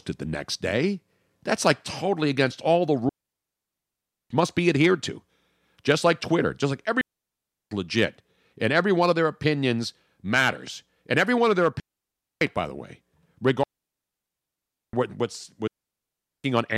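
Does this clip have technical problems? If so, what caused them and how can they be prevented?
Yes. Digital wireless dropouts cut the speech into clean, near-silent holes at 3.09–4.30, 7.01–7.71, 11.80–12.41, 13.63–14.93 and 15.68–16.44 s. The receiver lost too much data and muted quickly, with no noise burst either side. Keeping line of sight and shortening transmitter-to-receiver distance prevents this.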